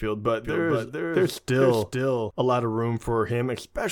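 From 0.45 s to 2.31 s there's a doubled audio track: a second full-band copy trails the speech by roughly 400 ms, around 5 dB down, with no decay or room colour, and it cuts off abruptly just before "a lot of room". Likely a slower capture path recording it twice.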